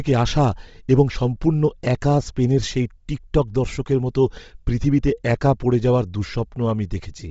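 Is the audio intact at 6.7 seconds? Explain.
No. At 6.7 seconds, as throughout, the speech sounds grainy and breathy, likely from heavy low-bitrate Bluetooth LC3 compression; a spectrogram shows nothing above 7.7 kHz and noise-filled upper bands.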